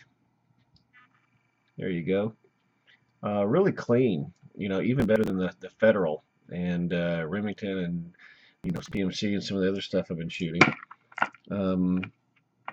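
At 5.0 to 5.30 s and again at 8.64 to 8.97 s, processor overload crackle breaks in as a gritty tearing burst. The processor repeatedly missed its deadlines for short buffers of around 10 ms, and each late buffer was skipped, so the audio jumps ahead with hard edges, the second burst denser. On a waveform these show as ragged discontinuities. A spectrogram shows thin vertical broadband streaks packed across each span, ending once the load clears.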